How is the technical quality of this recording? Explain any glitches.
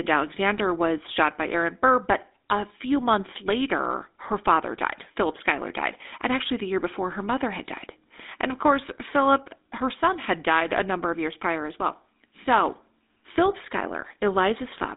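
The speech sounds buzzy and gravelly from start to finish, with a narrow, phone-like band and no content above about 3.8 kHz. This is the sound of the GSM full-rate codec, at a rate that fits its 13 kbps. The codec models the vocal tract and drives it with a sparse, regularly spaced pulse excitation, which produces the rough texture. The line band of roughly 250 Hz to 3.7 kHz strips both the lows and the highs.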